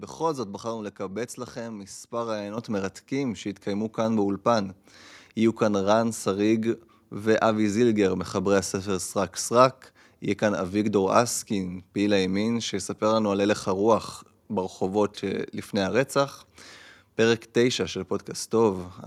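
At 2.58 s the microphone volume is stepped up: the calling software judged the input too quiet and raised the device's input level by about 8 dB in a single jump. Speech and background noise get louder together, instantly. That shared, abrupt rise sets it apart from a talker leaning closer, which lifts the voice but not the room noise, and from a gradual automatic gain ramp, which swells over time rather than snapping.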